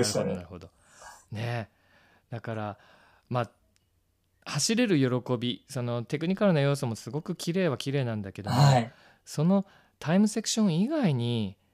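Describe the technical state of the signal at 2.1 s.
At 2.1 s the speech signal is intact, with no audible technical fault at that moment.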